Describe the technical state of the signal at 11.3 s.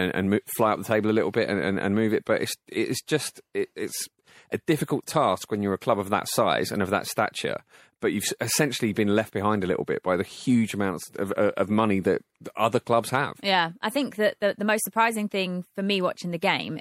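A short chirp-like blip cuts through the speech from 11.31 to 11.33 s, peaking at about -25 dBFS. This is a corrupt frame decoded: damaged bits in one compressed frame were played anyway, scattering energy into wrong frequencies for just that frame's span.

Underneath, the speech has a plainly audible watery, swirly texture with smeared consonant attacks. The likely cause is MP3 compression at a bitrate around 64 kbps, where the encoder trims high frequencies and lets weak spectral detail flicker between frames.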